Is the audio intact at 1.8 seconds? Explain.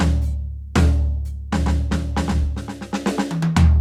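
Yes, the music at 1.8 seconds is intact, with no dropout, click, distortion or other fault at that moment.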